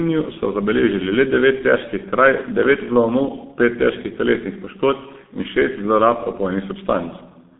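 Throughout the speech, G.723.1 codec damage is heavy: nothing survives above 3.8 kHz, and the voice turns muffled and hoarse, which fits a bitrate around 6 kbit/s. Unlike plain band-limiting, slow 30 ms model updates blur consonants.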